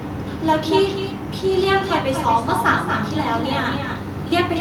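Echo with no canceller runs throughout: loudspeaker sound returns through a far-end microphone unremoved, so each phrase is shadowed about a fifth of a second later by a thinner copy about 8 dB down.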